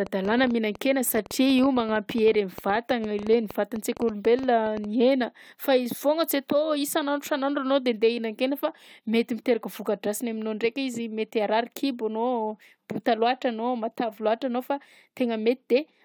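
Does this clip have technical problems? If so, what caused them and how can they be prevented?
Yes. A train of clicks runs from 0.07 to 4.85 s, about 9.4 per second at uneven spacing, roughly fifty similar pulses peaking a few dB above the speech and audible in pauses, likely from electrical interference or a faulty connection or power supply. Keep cables away from other equipment and use a stable, well-powered interface.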